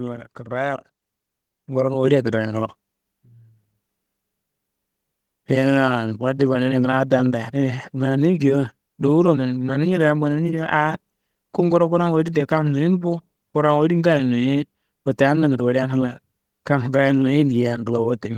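The clip is speech. At 1.02 s the level jumps up by about 5 dB in a single step. This is a microphone volume stepped up fault. Software judged the input too quiet and raised the device gain. Voice and background rise together at that instant.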